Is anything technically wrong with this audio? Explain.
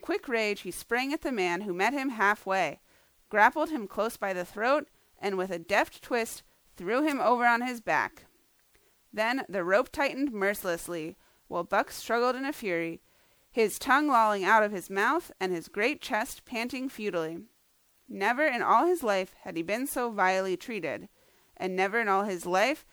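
Yes. Throughout the speech there is generation loss: swirly, hollow smearing with blurred attacks, likely from about seven successive MP3 passes near 128 kbit/s. On a spectrogram, the accumulated quantisation shows as flickering holes. At 7.10 s an electrical switching spike adds a sharp snap, likely a nearby arc, visible as a thin vertical spike on the waveform.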